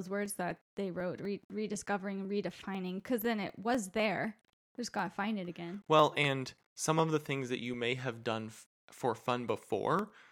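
Speech runs through a string of periodic USB or driver dropouts from 0.26 s to 10.24 s: every 0.25 s something stalls the audio path and about half a millisecond is skipped outright, so the signal jumps and a tick sounds over the speech, around forty in all. On a waveform each one is a small discontinuity; a spectrogram shows evenly spaced thin vertical broadband lines, visible only where speech is present.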